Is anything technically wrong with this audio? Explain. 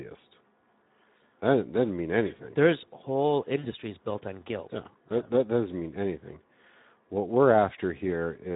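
Yes. Throughout, the speech sounds hoarse and grainy, with plainly audible coding damage. This is the Speex codec: its CELP coder has too few bits to model the excitation, and the damage fits a bitrate of around 11 kbps.

From 3.59 to 3.69 s the voice smears into a fading buzzy, coloured tone and stays weak briefly afterwards. This is VoIP packet loss concealed by the speech codec. About 40 ms of audio went missing, which fits two lost 20 ms frames. The decoder filled the gap by extending its last pitch and filter at falling gain, and needed a few frames to recover.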